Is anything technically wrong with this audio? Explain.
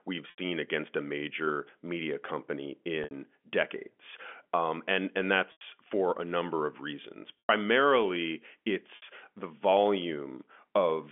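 Yes. At 0.30, 3.04, 5.52, 7.39 and 8.96 s the speech briefly freezes into a held, buzzy tone that fades out over about 50 ms, within gaps lasting 60 to 100 ms. This is packet loss with pitch repetition: the receiver loops the last pitch period to fill gaps where audio packets never arrived. The narrow telephone band of the G.711 coding is audible throughout.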